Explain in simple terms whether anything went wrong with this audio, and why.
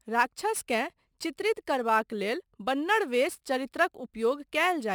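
Crude rate conversion affects the whole speech clip. Samples were simply dropped, with no smoothing, as fits a change from 48 kHz to 44.1 kHz, leaving a gritty, off-key fizz that follows loud and bright sounds. Codec swirl sounds watery instead.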